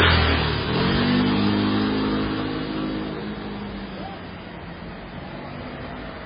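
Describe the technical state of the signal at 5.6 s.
MP3 compression at 5.6 s, as throughout: heavily damaged audio, nothing above 5 kHz, weak components flickering frame to frame into a watery swirl, likely from a very low bitrate.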